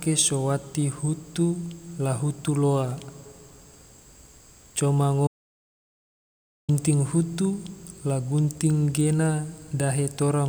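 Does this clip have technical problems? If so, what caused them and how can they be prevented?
Yes. There is an audio dropout to silence. The input was likely lost through a loose connection or a stray mute while the recorder kept writing zeros. From 5.27 to 6.69 s the speech cuts to total silence with no room tone, and about 1.4 s is gone. Securing connections and monitoring the input while recording prevents this.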